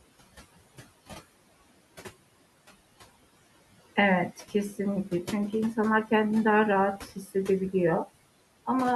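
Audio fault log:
Throughout: noise suppressor artifacts. The suppressor treats the steady room noise, about 17 dB below the speech, as something to remove. It pulls that noise down by about 19 dB in the pauses and lets it come back up under the speech, so the background pumps up and down with the talking.
6.98–7.35 s: speech cut by the noise suppressor. Around 150 ms of speech inside this span is mistaken for background noise and turned down with it, by about 11 dB at the deepest point. Those parts come out swallowed and fainter than the speech around them.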